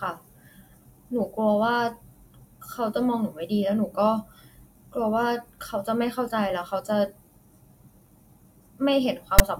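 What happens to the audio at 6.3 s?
Nothing goes wrong at 6.3 s; the speech carries on intact through that moment with no dropout, click or distortion.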